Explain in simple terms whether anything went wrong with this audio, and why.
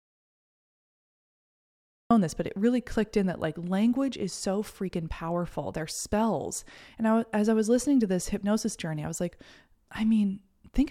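The audio input was likely lost, leaving an audio dropout to silence: dead silence from the start until 2.11 s, when speech resumes mid-sentence at "this but it really".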